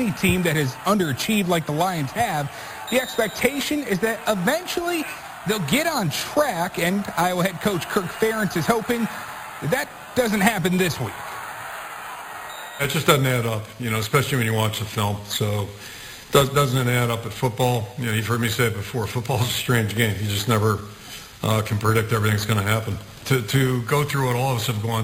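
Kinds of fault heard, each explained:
Imaging from sample-and-hold upsampling: the audio points to an original rate near 11 kHz raised to 44.1 kHz by repeating samples without smoothing, so mirrored spectra sit at about −15 dB, the lowest between about 5.5 kHz and 11 kHz, giving a metallic fizz throughout.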